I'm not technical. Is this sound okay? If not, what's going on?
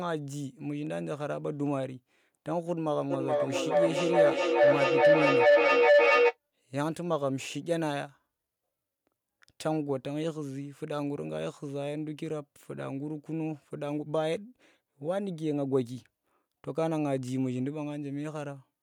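No. From 3.1 to 6.38 s there is feedback howl: two devices in one room were on the same call, so sound looped from loudspeaker into microphone, louder each pass. It swells into a mid-pitched howl, around 500 Hz, pulsing roughly every 0.4 s, louder than the speech.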